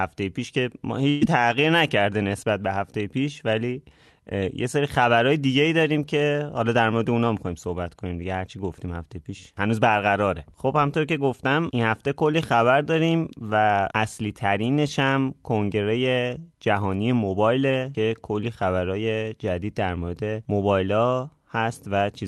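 At 1.09 s the speech briefly smears into a held buzz or fading hiss for about 120 ms before resuming slightly further on. This is a burst of packet loss: consecutive packets never arrived in time, so the receiver stretched the last sound to cover roughly 120 ms of missing audio.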